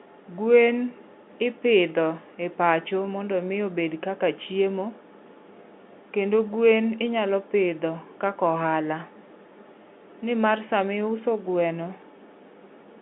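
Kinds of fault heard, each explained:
No faults can be heard.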